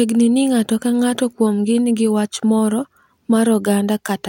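No technical faults can be heard anywhere in this speech recording.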